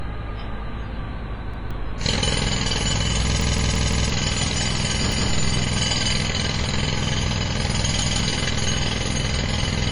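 From start to end the sound is dull and washy. Nothing reaches above 10.5 kHz. Transients ring and smear. A hiss rises and falls with the signal. The damage is heavy. This is likely WMA compression at a low bitrate, around 24 kbps. Its long transform blocks spread quantisation noise across tens of milliseconds. Weak spectral lines are zeroed out.

At 1.54 s comes the first repeated buffer, lasting until 1.71 s. A piece of about 170 ms plays twice, with a hard join. Fresh audio arrived late, so the device replayed its last buffer. The length fits an 8192-sample buffer. About 150 ms of real audio is lost.

From 3.41 to 4.10 s the same piece sounds five times in a row. That makes a stutter, and roughly 0.7 s of audio is gone.

Single repeats follow at 5.12 to 5.29 s and at 8.02 to 8.19 s. Each one loses about 150 ms.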